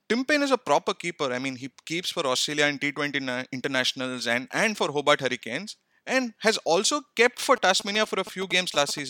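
A galloping dit-dit-dit of short buzzes runs under the speech from 7.56 to 8.99 s, sitting roughly 10 dB below it. These are GSM signalling bursts: a nearby 2G phone exchanging brief radio bursts with the network, not carrying a call. The audio circuit rectifies the RF pulses into sound, and their repetition at about 217 Hz gives each buzz its pitch.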